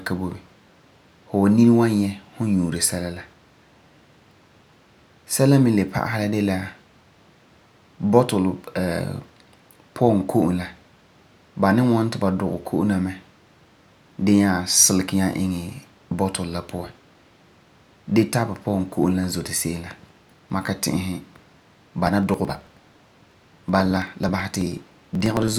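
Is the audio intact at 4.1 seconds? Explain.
Yes, at 4.1 seconds the speech runs through cleanly, with no dropout, click, distortion or other fault to be heard at that moment.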